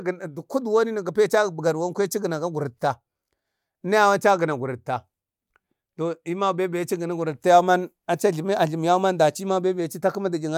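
No technical faults can be heard anywhere in this recording.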